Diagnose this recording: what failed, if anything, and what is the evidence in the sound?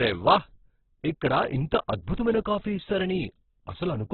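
The failure sits at the codec stage, and the likely cause is Opus compression at a very low rate, in the range of 8 kbps. Throughout the speech, nothing reaches above about 4.2 kHz, so the band has been narrowed, and the remaining sound is rough and grainy rather than swirly. The encoder kept each band's energy but, short of bits, filled bands with folded or noise-like content.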